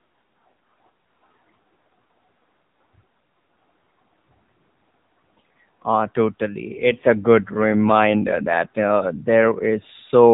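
From start to end, the speech carries AMR narrowband mobile codec damage. Nothing above 3.8 kHz survives, so it sounds thin and muffled. The damage is plainly audible: voices turn buzzy and synthetic, which fits a low AMR-NB mode near 8 kbps.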